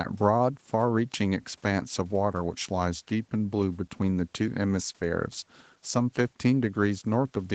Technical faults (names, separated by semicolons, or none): none